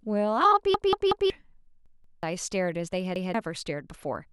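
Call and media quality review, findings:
Repeated buffer stutter at 0.74–1.30 s, 1.86–2.23 s, 3.16–3.34 s. Same 186 ms chunk replays with hard joins, fitting an 8192-sample buffer. Playback underrun; device reused last buffer.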